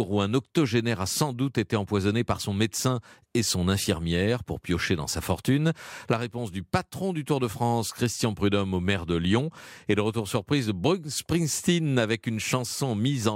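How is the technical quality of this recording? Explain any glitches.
Nothing here calls for explanation, since I don't hear a single glitch anywhere in the recording.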